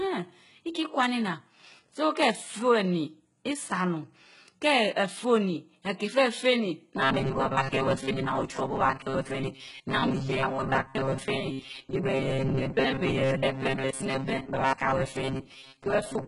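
From the start, the speech carries heavy codec damage, with nothing above 11.1 kHz and treble that sounds rebuilt rather than real. This points to HE-AAC compression at likely around 12 kbps, where spectral band replication copies lower bands upward, so harmonics misalign across the crossover.

From 7.01 s to the end, the speech becomes a rigid buzz at 134 Hz that follows the original only loosely. This is likely robotic sound from repeated short buffers. Roughly 70 percent of the audio consists of repeated segments of about 7.5 ms, while the real audio in between is skipped.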